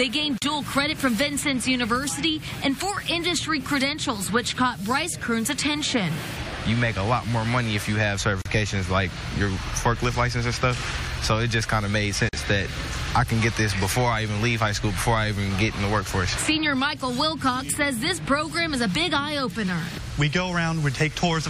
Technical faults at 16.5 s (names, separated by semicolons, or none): none